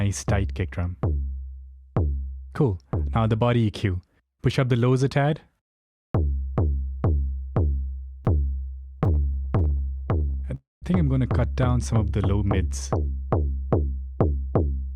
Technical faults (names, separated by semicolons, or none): chunks out of order; repeated stalls (stutter); call audio freeze; jitter buffer speed-up